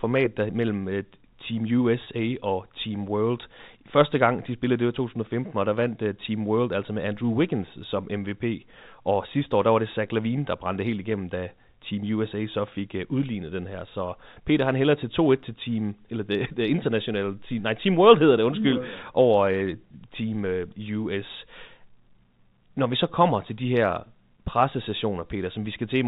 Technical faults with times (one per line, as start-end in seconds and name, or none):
2.04-2.06 packet loss with pitch repetition